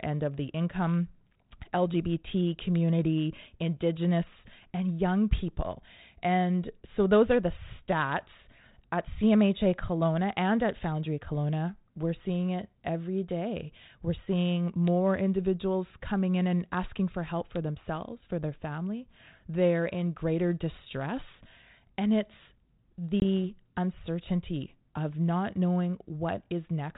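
Speech over a G.726 ADPCM link at 32 kbit/s, band-limited below 4 kHz. At 23.2 s there is packet loss on an ADPCM call. A hard-edged silent gap of about 20 ms cuts the speech, which fits a single lost packet. The decoder's adaptive predictor and step size lose track of the sender's. So the speech resumes with brief, slight distortion. It recovers by about 23.23 s.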